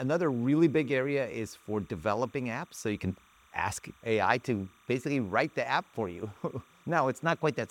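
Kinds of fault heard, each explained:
Timecode bleed: a faint, steady chirping warble near 1 and 2 kHz sits well below the sound throughout, as 29.97 fps linear timecode leaks in from an adjacent track or cable.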